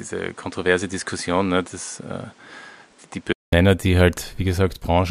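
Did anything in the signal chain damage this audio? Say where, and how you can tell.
Yes. From the start to 3.53 s the speech has nothing above 10.5 kHz, sits about 5 dB quieter, and carries its own background noise roughly 30 dB below the speech. At 3.53 s a 200 ms silence gives way to fuller, cleaner sound. The likely cause is that the input switched to a poorer device at the capture stage. A codec's low-pass would not also shift level and noise floor together, with a gap at the change.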